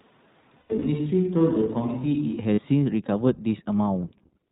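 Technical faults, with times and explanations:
Throughout, iLBC codec: the band stops at 4 kHz and the sound has a rough, slightly synthetic edge. Each frame's excitation is coded on its own, and the texture fits iLBC's 15.2 kbps mode with 20 ms frames. The damage is plainly audible.
0 to 2.39 s, switch to a distant microphone: already under way when the clip opens, the sound is roomy and hollow, thin in the bass, about 5 dB quieter, with room noise roughly 35 dB below the speech. A close microphone likely dropped out before this, and the return to it at 2.39 s is abrupt.
0.58 to 0.83 s and 2.54 to 2.60 s, lost iLBC frames: the decoder fills the gaps by repeating the last pitch cycle mixed with noise, which sounds like a held, buzzy vowel. In the first event, 160 ms of audio is missing across 240 ms, with the longest run about 100 ms. The second gap lasts 40 ms. Because the frames are independent, the sound recovers almost immediately.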